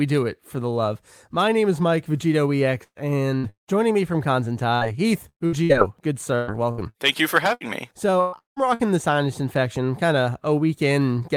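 At 2.83 to 2.98 s, and again at 3.37 to 3.46 s, a burst of packet loss cuts out about 120 ms and then 60 ms of speech. The receiver stretches the last sound and fades it out, the first trailing into roughly 70 ms of silence, before speech picks up further along.

From 3.49 to 3.70 s, about 180 ms of speech is lost, most likely to a long network dropout. A brief fading continuation of the last sound gives way to about 120 ms of silence before the audio returns.

Between 4.75 and 5.72 s, and again from 6.35 to 8.94 s, repeated packet loss keeps opening holes: four in the first stretch, seven in the second, the longest about 112 ms and 177 ms. Each is patched by extending the preceding sound, covering roughly a quarter of each span and leaving the speech choppy.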